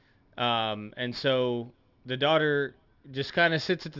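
Aliasing runs through the whole speech clip. The sound points to a drop to a 12 kHz sample rate with no anti-alias filter, so energy above 6 kHz folds back as unrelated tones, roughly 25 dB under the speech, giving sibilants a gritty, metallic edge.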